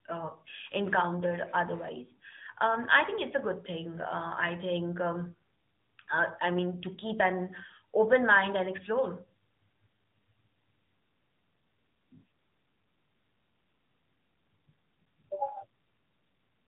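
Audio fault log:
throughout AMR narrowband mobile codec. Nothing passes above 3.8 kHz. Speech is rebuilt from a vocal-tract model and sparse pulses, sounding plainly buzzy, which fits roughly 10 kbps.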